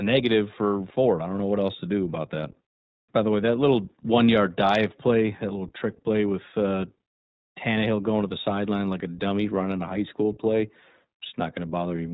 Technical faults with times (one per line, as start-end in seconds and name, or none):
0.00-12.14 iLBC codec